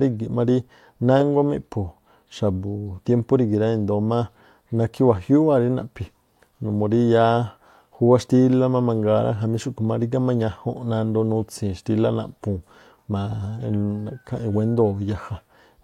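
Nothing goes wrong anywhere in this speech recording, so there's no fault to walk through at any point along the way.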